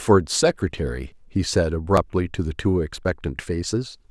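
At 1.12 s, 1.97 s and 3.05 s the speech jumps forward with no gap. Each is likely a dropped buffer (overrun), where samples were overwritten before being read. The first two lose a few milliseconds. The last loses more, around 15 ms.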